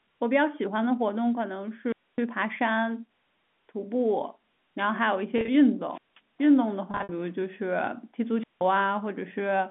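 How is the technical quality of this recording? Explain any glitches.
The recording has two recurring kinds of glitch. The speech comes through a telephone-band channel of roughly 150 Hz to 3.5 kHz, consistent with G.711 A-law coding.

Wireless microphone squelch dropouts occur at 1.86–2.22 s, 5.91–6.21 s and 8.39–8.63 s. The microphone's radio signal fades. Hiss rises briefly. Then the receiver's squelch shuts the output off. That leaves holes of near silence, about 260 ms, 186 ms and 177 ms long. The speech then returns.

Packet loss with pitch repetition occurs at 5.38–5.48 s and 6.91–7.09 s. In the first, 70 ms of audio is missing across 100 ms, with the longest gap 40 ms. In the second, 140 ms is missing across 180 ms, with the longest gap 60 ms. That fits packets of about 10 ms. The receiver fills each gap by repeating the last pitch period. This gives a held, buzzy tone that fades toward silence, followed by a quick cross-fade back to the speech.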